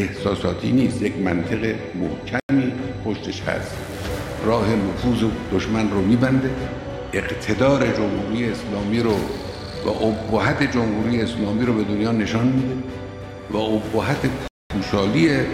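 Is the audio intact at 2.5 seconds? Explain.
No. At 2.5 seconds the audio is just coming back from a Bluetooth stall. The sound cuts to silence at 2.40 s and stays silent until 2.49 s, a gap of 94 ms, then playback resumes. The likely cause is radio interference delaying packets on the wireless link, so the headphones' playback buffer ran empty and output simply stopped until the retransmitted data arrived to refill it.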